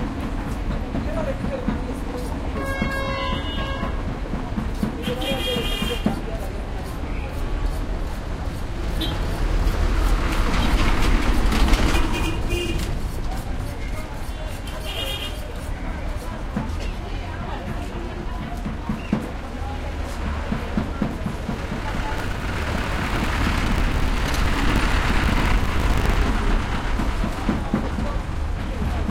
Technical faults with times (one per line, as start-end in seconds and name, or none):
22.16-26.24 buffer tearing